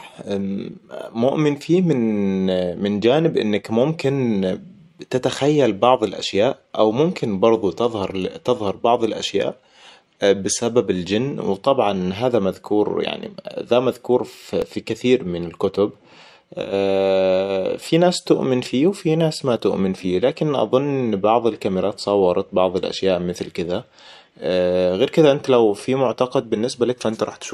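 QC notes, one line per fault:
14.62 s, block of digital silence: for about 0.67 ms the speech is replaced by silence, consistent with a short 32-sample block of output that the program never filled in time. The waveform drops straight to silence and straight back with no fade. Because the hole is far too short to be heard as a gap, the two abrupt edges merge into a single tick or dip in the speech.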